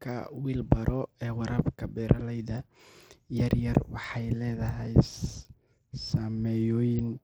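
Throughout the speech, the treble flickers and drops away, and a gritty, grainy noise rides on every sound. This is likely Bluetooth SBC compression. Its starved upper sub-bands lose bits, and the rest are coarsely quantised. The damage fits roughly 96 kbps.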